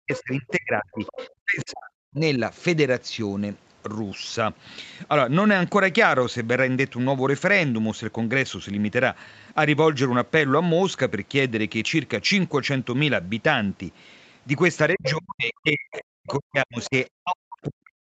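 Speech suppressed in double talk, from 0.0 to 2.4 s: the speech dips in pieces, for about one and a half seconds in total, falling by roughly 40 dB at its deepest. The likely cause is an echo canceller that could not separate the near talker from loudspeaker echo while both sides spoke, so it turned everything down.

The other side's voice leaking through, from 0.14 to 0.51 s and from 0.93 to 1.28 s: a second voice is audible at about 15 dB below the speech. This is likely loudspeaker playback that the echo canceller failed to remove fully from the microphone signal.

Speech suppressed in double talk returns from 14.94 s to the end of the clip, with the same choppy ducking of up to roughly 40 dB. Again, the likely cause is the canceller attenuating the talker during overlap.

The other side's voice leaking through appears inside that stretch as short scraps at 15.03 to 15.12 s, 15.93 to 16.33 s and 16.82 to 16.90 s. 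They sit about 5 dB, 15 dB and 20 dB below the speech, so the first is almost level with it. These are likely residual echo left in the microphone signal. Throughout the clip, the top of the band stops near 8 kHz, which fits the Opus call path.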